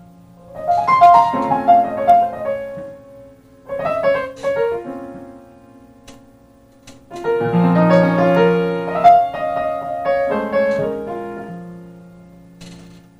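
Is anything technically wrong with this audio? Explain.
Yes, there is hard clipping in two places: from 1.03 to 1.20 s, where the signal is driven about 3 dB past the ceiling, and from 9.06 to 9.11 s, about 2 dB over. The peaks exceed what the stage can pass, so they are sliced flat, adding harsh high harmonics heard as brief crackle. On a waveform the tops look squared off, and on a spectrogram vertical smears of high-frequency energy appear at those moments.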